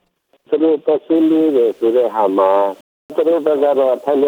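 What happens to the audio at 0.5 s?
Nothing goes wrong at 0.5 s; the audio there plays through cleanly, with no dropout, click, distortion or other fault.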